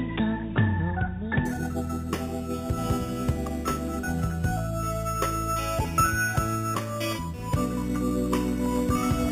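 From 1.45 s to the end, the audio was raised to a higher rate by holding each sample in place with no smoothing filter, which fits an 8 kHz source stepped up to 48 kHz. This imaging from sample-and-hold upsampling leaves mirrored copies of the spectrum, the first between 4 kHz and 8 kHz at about 16 dB below the wanted sound. It adds a bright, metallic fizz that rises and falls with the sound, its lowest band moving against the pitch.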